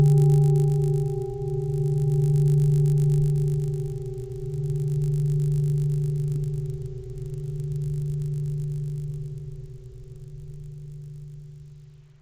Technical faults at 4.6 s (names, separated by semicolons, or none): resampler restarted on every block